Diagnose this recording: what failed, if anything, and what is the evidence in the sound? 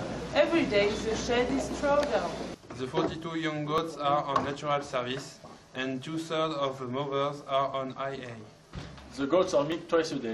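Overlap between stream segments produces tiny skips at 1.80, 3.78, 5.76, 7.74 and 9.72 s, spaced just under 2 s apart. The failure is in network stream assembly. The timestamps on consecutive 2-second segments overlap slightly, so the player trims the apparent duplicate. That material was never actually repeated, so a few milliseconds of audio vanish at each boundary and the waveform jumps, giving a brief skip.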